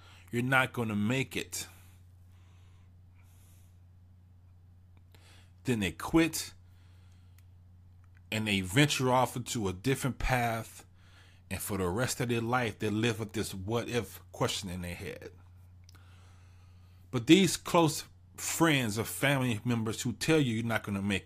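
Nothing in the speech stood out as a technical fault on listening.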